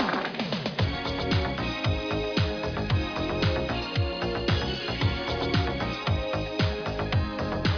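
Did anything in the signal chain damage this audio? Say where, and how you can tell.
No, nothing in the signal chain audibly damaged this audio. No point in the clip shows any trace of the path the sound travelled through.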